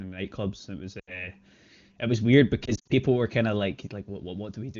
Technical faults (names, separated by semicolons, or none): lost AMR speech frames